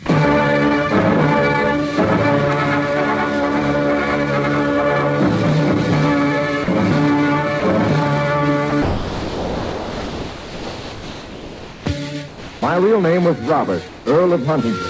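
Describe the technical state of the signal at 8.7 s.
At 8.70 s the sound briefly gives way to a flat, steady hiss for about 20 ms before it returns, with everything band-limited to 8 kHz by the call codec. This is likely sound dropped by the voice detector: the sender judged that instant to be background and stopped transmitting, so the receiver filled it with comfort noise.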